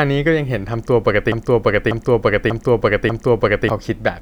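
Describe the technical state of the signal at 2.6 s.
At 2.6 s the speech is stuck in a broken-record loop: from 1.32 to 3.70 s one 0.59 s fragment repeats identically four times, and the speech meant for that span is lost. The likely cause is a stalled player or stream resending its last held fragment.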